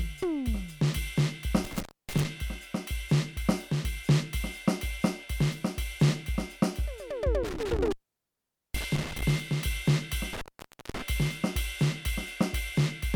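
The music drops out with crackle at each edge three times: 1.6 to 2.2 s (open about 0.28 s), 7.4 to 9.2 s (0.82 s) and 10.3 to 11.0 s (0.53 s). This is intermittent contact, a loose plug or cable briefly breaking the signal path.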